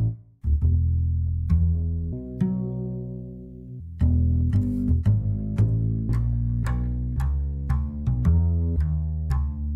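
A section at the wrong speed runs from 2.13 to 3.8 s, playing at 1.52 times its recorded rate. Speed and pitch rise together, so the passage jumps up roughly seven semitones and sounds hurried, likely from being clocked wrongly during editing or playback.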